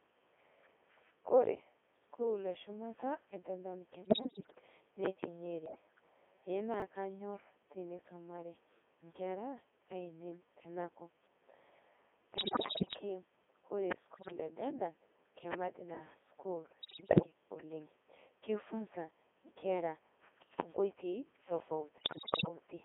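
The whole clip of speech runs through a Codec 2 vocoder, and it sounds heavily damaged: robotic and buzzy, squeezed into a 200 Hz to 3.4 kHz band. The decoder rebuilds the voice from sine waves using only pitch, voicing, level and envelope, which fits the top 3.2 kbit/s mode.

On top of that come bit errors on digital voice radio at 4.02–4.61, 5.66–5.81, 12.38–13.00, 14.14–14.32, 16.80–17.26 and 21.98–22.48 s. Flipped bits corrupt whole frames of parameters, so pitch, level and tone jump around into warbles and bleepy gibberish. The bursts at 5.66, 12.38 and 21.98 s are noticeably worse.

Between those, at 6.74–6.82 s, there's a brief jumbled moment: chunks out of order. A 20 ms chunk plays three chunks late, so nothing goes missing, but the hard joins between the reordered chunks garble the sound for that instant.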